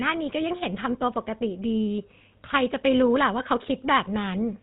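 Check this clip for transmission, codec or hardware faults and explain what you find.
The speech has passed through the GSM full-rate codec, and the damage is plainly audible from start to finish. The codec models the vocal tract as a filter and drives it with a regular train of pulses, keeping only every third excitation sample. Fine detail in the voice is lost. The result is a buzzy, gravelly roughness on the voice. Nothing above 4 kHz survives, so the sound is muffled. This character fits the 13 kbit/s GSM coder.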